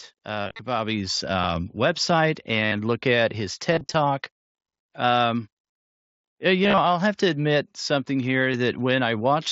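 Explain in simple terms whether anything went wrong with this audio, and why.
Right at the start, between about 0.25 and 1.8 s, the speech and the background swell up together over roughly a second and a half, ending noticeably louder. That is automatic gain rising: the automatic gain control judged the input too quiet and slowly turned its own volume up. Because it boosts everything it hears, the background rises right along with the speech rather than the speaker getting louder.

Scattered through the clip are brief buzzy, smeared blips, the longer ones with a tiny wobble as normal sound comes back. They fall at about 0.41 to 0.59 s, 1.41 to 1.44 s, 2.65 to 2.72 s, 3.72 to 3.94 s, 6.64 to 6.78 s, and a very short one at 8.53 s. This is concealed Bluetooth headset packet loss. Bits of audio went missing on the wireless link between headset and phone, and the phone filled each gap by repeating a closely matching slice of the sound just before it. 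The repeated patches are short, the longest about 70 ms, so they come across as small glitches rather than long held tones. The wideband mSBC headset codec carrying the call is working as designed, passing speech with its normal slight graininess.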